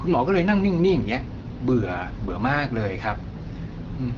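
Nothing stood out on listening to this speech, which comes through the AMR wideband (HD Voice) codec at 12.65 kbit/s with its band ending at about 7.1 kHz.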